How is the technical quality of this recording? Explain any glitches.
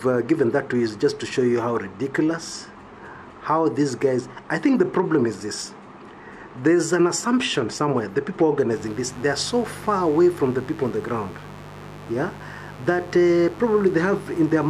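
One fault is audible. From 8.72 s to the end, a mains buzz appears: switching spikes twice per 50 Hz cycle add harmonics into the kilohertz range, producing a steady raspy buzz about 20 dB below the signal.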